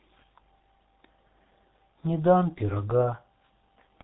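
From start to finish the speech carries heavy G.723.1 codec damage. Nothing gets through above 3.8 kHz, so it's muffled, and the slow 30 ms frame updates leave it hoarse with smeared consonants. The damage fits a rate around 6.3 kbit/s.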